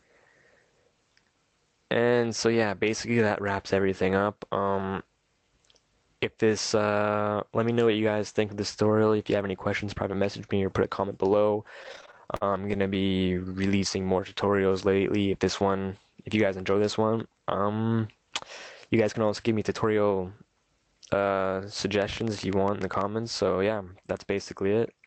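Between 11.83 and 13.56 s there are repeated stalls, a stutter. Packets were reaching the receiver late or more slowly than they were played out, so the jitter buffer kept running dry. The receiver filled each gap by continuing the last sound, some thirty times, with the longest gap 50 ms. Altogether 356 ms was filled, about 21% of that span, and nothing was lost. The audio drags and hiccups rather than dropping out.

From 14.20 to 15.09 s comes a jitter buffer slow-down. The buffer was building up a reserve by repeating single pitch periods and fragments of pauses many times over. This added 128 ms, so playback runs at 87% speed. The pitch stays where it was, but sounds are drawn out.

The opposite happens from 17.02 to 18.10 s, a jitter buffer speed-up. Too much audio had accumulated in the buffer. To trim the delay, the receiver cut out short pieces one or a few pitch periods long, again and again, removing roughly 150 ms. 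Playback runs at 111% speed with unchanged pitch, and the passage sounds hurried.

From 22.02 to 23.02 s a train of clicks sits over the audio. There are about ten similar pulses, averaging 11.1 per second at uneven spacing, and they peak roughly 10 dB above the signal. They are heard as ticking on top of the sound, including in the pauses, and the likely cause is electrical interference or a faulty connection or power supply.

All of this passes through an Opus call path whose band stops at 8 kHz, a band limit and coding texture consistent with a bitrate near 24 kbps.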